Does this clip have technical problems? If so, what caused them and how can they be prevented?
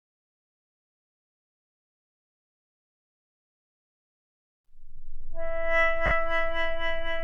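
Yes, there are lost LE Audio frames at 6.06–6.11 s: about 50 ms, consistent with five 10 ms frames, which the LC3 decoder patched by repeating the last spectrum with scrambled signs, leaving a brief noisy smear. Keeping the Bluetooth link short and clear of 2.4 GHz interference would prevent it.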